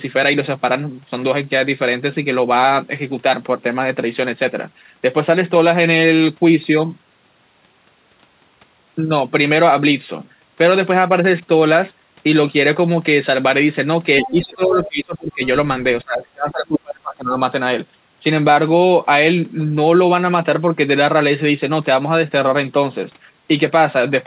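From 14.18 to 14.43 s, other side's voice leaking through: a second voice sits about 10 dB below the speech, likely loudspeaker echo the canceller left in. From 14.22 to 15.43 s, speech suppressed in double talk: the talker dips by roughly 25 dB, likely because the canceller turned both voices down during overlap. From 16.03 to 17.35 s it happens again, with drops near 30 dB. Throughout, nothing reaches above 4 kHz, which fits a G.711 telephone-band call path.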